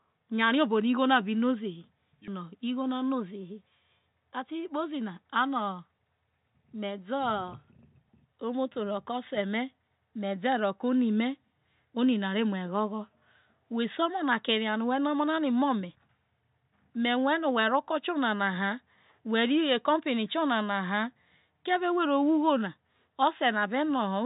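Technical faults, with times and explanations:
Nothing stood out on listening to this speech recording, which comes over a call path carrying nothing above 4 kHz.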